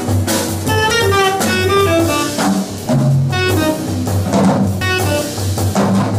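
The audio skips at 0.91, 2.86 and 4.81 s, roughly every two seconds. Each time about 50 ms of sound is missing, and the two sides are butted together with no gap. This is likely audio missing between chunks, lost while one two-second block closes and the next opens.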